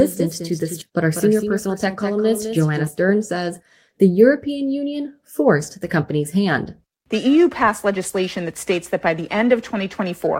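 From the very start until 2.87 s, a doubled audio track is heard: a second, full-band copy of the sound trails the original by roughly a fifth of a second, about 10 dB quieter, with no reverberant tail or room colouring. It is most likely a second capture through a slower path or two misaligned copies in an edit. It sounds like a dry slapback echo that cuts off abruptly at 2.87 s. On a waveform, each transient has a smaller twin shortly after it. On a spectrogram, every onset shows a fainter duplicate shifted right by the same amount.

At 0.81 s there is a skip ahead. Roughly 0.7 s of sound was discarded while later audio was already queued, and playback jumps straight to it with no gap and no fill. The result is an abrupt splice where material goes missing and the two sides of the jump butt together. The waveform shows a sudden change in envelope at a single point, and the spectrogram shows the spectral content switching without any silence between the two sides.

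From 0.91 to 1.88 s, a jitter buffer speed-up follows. With too much audio waiting, the receiver trimmed many short pitch-period slices, removing about 70 ms in total and running the sound at 106 % speed with unchanged pitch. It comes across as slightly rushed, with the rhythm tightened. On a spectrogram, the harmonic lines keep their spacing while events arrive closer together than they should.

From 7.14 s to the end, periodic clock jitter sets in. The converter clock is being modulated at about 1 kHz, so every spectral component gains sidebands 1 kHz above and below it, and the higher components are affected more. The effect is a gritty, metallic edge on sounding passages that disappears in silence. The spectrogram shows faint parallel ghost lines flanking each harmonic at a fixed 1 kHz offset.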